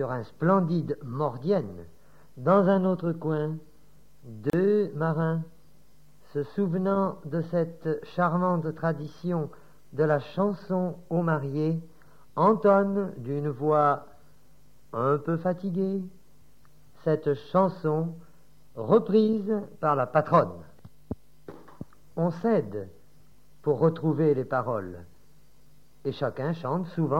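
At 4.50 s the audio drops out for about 34 ms, ending at 4.53 s: a gap at a join of encoded pieces. Two separately encoded segments were butted together untrimmed, so the first one's padded final frame and the next one's start-up delay both remain as silence. It sounds like a brief hole, and then the sound resumes exactly where it left off. On a waveform it shows as a flat notch with smeared edges. A spectrogram shows a narrow blank column, its borders blurred by the codec.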